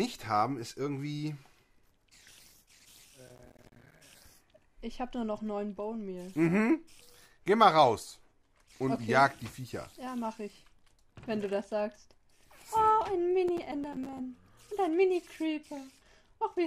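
From 3.27 to 4.01 s, processor overload crackle breaks up the sound. The processor could not fill each short buffer in time. Many deadlines were missed in a row. Each miss drops a few milliseconds to silence with hard edges, which fits buffers of about 5 ms. Together they make a gritty, tearing crackle. A second, lighter burst follows from 13.48 to 14.19 s, with fewer dropouts. Both stop cleanly when the load eases.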